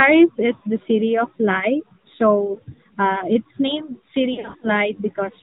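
Throughout, the speech passes through the AMR narrowband mobile codec. Everything above 4 kHz is cut, and the pulse-driven vocal-tract model leaves a plainly buzzy, synthetic edge, which fits a mid-rate mode near 10 kbps.

At 0.56 s, lost AMR speech frames leave a 60 ms hole, pointing to three lost 20 ms frames. The decoder bridges it by reusing the last pitch and vocal-tract settings at falling gain, which gives a brief warbling dip.

From 4.34 to 4.69 s, losses totalling 160 ms are scattered across 280 ms, with no run longer than 40 ms. Each short gap is concealed the same way, so the sound repeatedly wobbles, dips and roughens.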